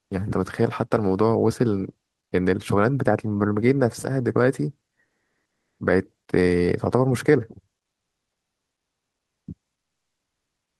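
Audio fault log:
5.05–5.79 s, comfort noise in place of the background: for about 740 ms the speech pause carries a steady, featureless hiss instead of the real room background, which sits about 62 dB below the loudest speech. The fill shifts the background level by about 4 dB and drops its fine detail until the speech resumes. This is likely Opus DTX: the sender stops transmitting during silence and the receiver synthesises shaped noise to cover the gap.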